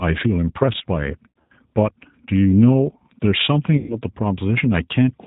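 Speech runs through G.729 coding the whole way. Nothing above 4 kHz survives, and the voice sounds plainly rough and synthetic, which fits an 8 kbit/s G.729A stream. VoIP packet loss concealed by the speech codec hits at 1.30 to 1.52 s and 3.77 to 4.00 s. The decoder stretches its last frame into a fading buzzy tone or coloured noise. The speech stays weak or distorted for tens of milliseconds or more after each gap.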